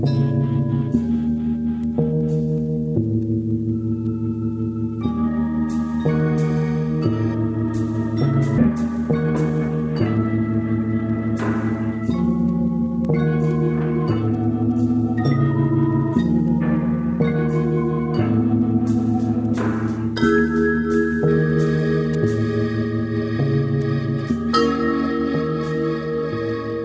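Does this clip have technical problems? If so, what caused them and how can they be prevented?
Yes. At 8.58 s there is a skip ahead: about a second of audio was dropped while later audio waited in the buffer, so playback jumps straight on with no gap. A waveform shows an abrupt seam joining unrelated sections. Preventing it means sizing the jitter buffer to absorb delay bursts rather than discarding a backlog.

From 8.69 to 9.59 s a jitter buffer speed-up runs the audio about 15% faster at unchanged pitch, trimming roughly 150 ms as pitch periods are cut repeatedly. A spectrogram shows compressed timing with harmonics unshifted. Smoother network delivery and gentler buffer draining prevent it.

The call path is audible as nothing above 8 kHz, which fits a G.722 codec at 64 kbps.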